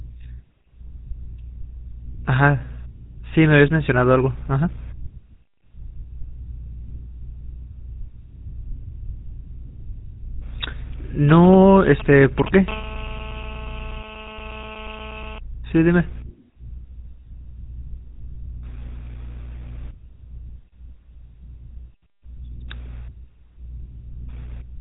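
From start to finish the speech has a buzzy, gravelly roughness and nothing above about 3.8 kHz. This is the GSM full-rate codec, plainly audible here. It rebuilds speech from a vocal-tract model driven by a sparse, regularly spaced pulse excitation, which fits a 13 kbps GSM stream.

From 11.29 to 12.49 s a galloping dit-dit-dit of short buzzes cuts in, nearly as loud as the speech. These are GSM signalling bursts. A nearby 2G phone sent brief groups of radio bursts at a 216.7 Hz rate while signalling, and the audio circuit rectified them into sound.

From 12.68 to 15.39 s a hard, raspy, harmonic-rich buzz runs steadily underneath, about 12 dB below the speech and unrelated to it. This is GSM phone buzz. A nearby 2G phone was transmitting in bursts during a call, pulsing its radio at 216.7 Hz, and the circuit demodulated those pulses.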